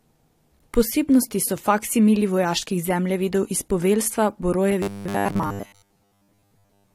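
From 4.82 to 6.94 s the speech becomes a rigid, metallic 100 Hz buzz: robotic sound from repeated short buffers, likely 10 ms chunks replayed.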